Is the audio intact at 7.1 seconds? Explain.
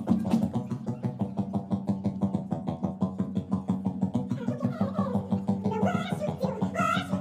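No. At 7.1 seconds, as everywhere else in the clip, the sound runs twice as fast as it should and sits a full octave high, about 12 semitones up, with a hurried, chipmunk-like quality. This is a wrong sample rate fault across the entire recording. The samples are being played back at double the rate they were captured at with no conversion. This fits audio recorded near 22 kHz but played at 44.1 kHz, so speed and pitch both rise by the same factor of two.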